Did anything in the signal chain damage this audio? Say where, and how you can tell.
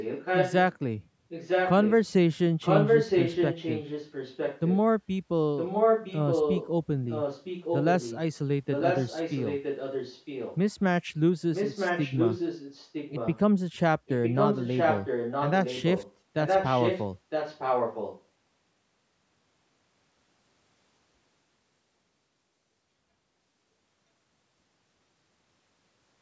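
Yes: echo leak at 0.0–0.76, 1.29–1.97, 2.61–4.77, 5.57–6.7, 7.08–8.19, 8.7–10.58, 11.54–13.39 and 14.06–18.23 s. The speech returns about 0.96 s late at nearly equal level, about 5 dB lower from 7.08 to 13.39 s, likely from a loudspeaker echo canceller failing in call processing.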